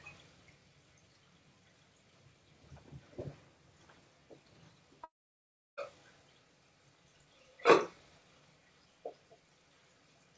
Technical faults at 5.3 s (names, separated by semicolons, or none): long network dropout